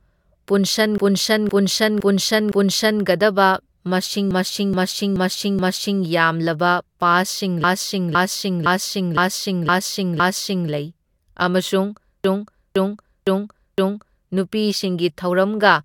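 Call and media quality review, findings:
Repeated frames, four stutter events in speech: 0.98–3.03 s, 4.31–6.02 s, 7.64–10.71 s, 12.24–14.29 s. Same 512 ms block replayed (about 427 ms at 4.31 s), extra plays 4, 4, 6, 4, adding 2.05, 1.71, 3.07, 2.05 s. Probable component: encoder output or transport layer writing or resending a short run of compressed frames. Decoder plays each duplicated run in full, lengthening the audio.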